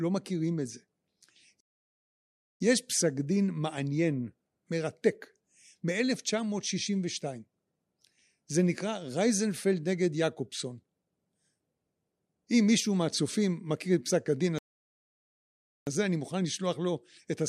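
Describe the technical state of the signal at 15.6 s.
At 15.6 s the speech has dropped to dead silence, part of a gap from 14.59 to 15.87 s, after which it picks up exactly where it broke off. This is a rebuffering stall: playback exhausted its downloaded audio and paused about 1.28 s until more data arrived.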